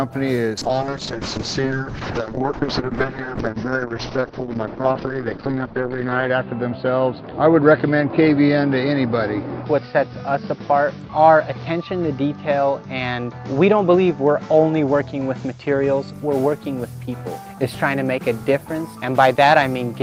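From 0.58 to 16.19 s, a call bitrate drop leaves sound watery and cut off above 6 kHz; the coarse texture separates it from filtering.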